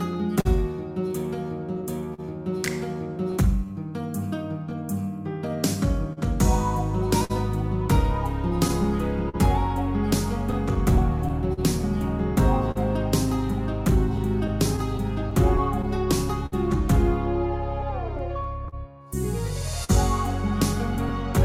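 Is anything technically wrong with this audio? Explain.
Yes. Clock drift between sender and receiver runs throughout: the sender's clock is roughly 4% slow, so the buffer keeps draining, producing recurring stretched or repeated slivers and timing hiccups rather than smeared patches. Scattered short gaps, roughly thirty, appear from 0.13 to 21.38 s, each under about 50 ms, concealed by extending the last sound, which leaves brief smears and ticks rather than a steady timing wobble.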